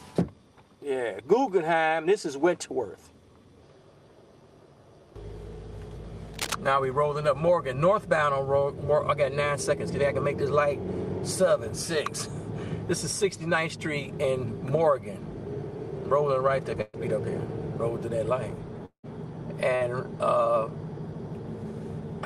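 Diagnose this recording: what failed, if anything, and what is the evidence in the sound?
The analogue wiring stage is the likely source of the cable scratch noise from 6.34 to 6.55 s. For about 0.2 s a dense, uneven scratching rides over the sound, nearly as loud as the programme itself. That texture fits a worn cable, connector or control being moved, with its contact resistance jumping around rapidly and injecting irregular noise bursts straight into the signal path before conversion.

The network stage shows a burst of packet loss twice. At 16.81 to 16.96 s, 120 ms of audio never arrives. The receiver fills the gap by extending the last sound and fading it, then resumes 120 ms further on with that stretch missing. At 19.75 to 19.84 s the same happens on a smaller scale: about 55 ms of concealment covers 60 ms of lost audio. Both point to a few consecutive packets dropped or arriving too late.

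The long network dropout from 18.85 to 19.06 s is also on the network side. About 180 ms of audio is lost. Concealment carries the last sound forward as a fading buzz or hiss across roughly 178 ms, and it decays until about 90 ms of silence remains before audio returns. The length and the drop to silence most likely indicate a stretch where nothing reached the receiver, rather than a short packet burst.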